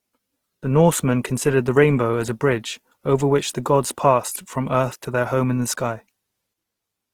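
Opus compression runs throughout the speech, with plainly audible damage: the sound is rough, grainy and noisy rather than swirly, and the full bandwidth stays open. This likely comes from Opus in its music mode at a low bitrate around 16 kbps, where starved bands get filled with folded or noise-like energy.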